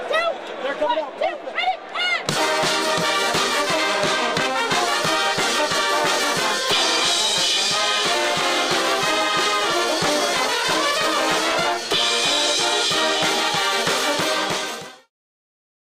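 There are no technical faults to describe; the only change in level is a smooth fade-out from around 14 s to 15.11 s.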